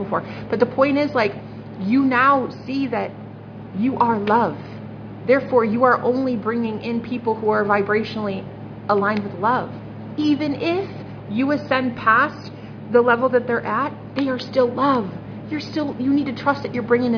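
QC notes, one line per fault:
No faults found in the clip. Nothing on the line needs attention.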